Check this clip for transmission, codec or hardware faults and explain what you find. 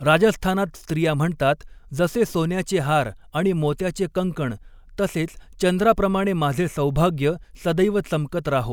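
No faults turn up anywhere in this speech recording. There is nothing to single out, so no times or values need noting.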